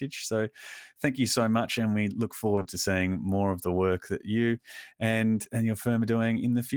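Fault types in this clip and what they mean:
Short concealed packet loss: three back-to-back 20 ms gaps around 2.55 to 2.67 s, each patched by the receiver extending the previous sound, leaving a brief smear.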